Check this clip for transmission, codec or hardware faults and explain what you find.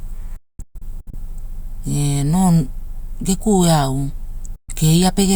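Yes, there are faults: two digital broadcast dropouts break up this speech.

From 0.36 to 1.14 s the sound cuts out in a cluster of short holes totalling 480 ms, the longest 224 ms. At 4.56 to 4.69 s, right after "geku eau", there is a single 128 ms silence. Each cut and return uses a 3 ms fade. The receiver lost frames or rejected corrupted ones and muted until good data resumed. The gap lengths fit 32 ms frames, and the audio from those moments is gone.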